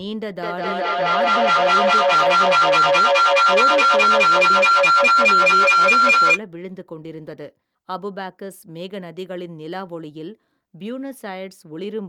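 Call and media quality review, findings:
Feedback howl, 0.41–6.43 s: mic-to-speaker loop gaining each pass, narrowing to a tone near 1.5 kHz, pulsing about every 200 ms, peaking about 13 dB above speech.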